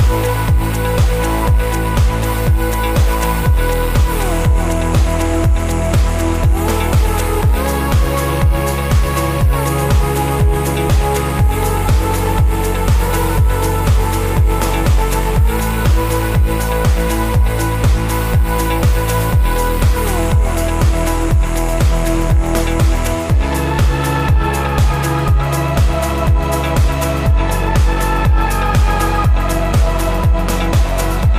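Nothing here calls for comment; the audio runs its whole course without a single technical fault worth pointing out.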